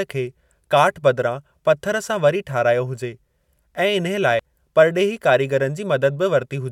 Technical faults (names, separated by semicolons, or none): compressed frames skipped